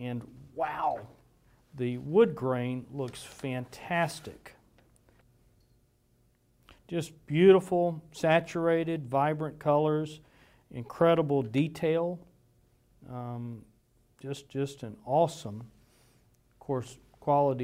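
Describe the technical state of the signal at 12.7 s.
At 12.7 s the signal is intact, with no audible technical fault at that point.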